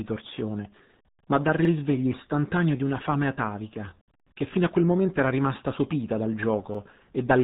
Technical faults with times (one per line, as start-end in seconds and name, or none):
0.00-7.43 RealAudio 14.4 codec
1.65-1.70 overlapping chunks
4.20-4.25 overlapping chunks
6.75-6.79 overlapping chunks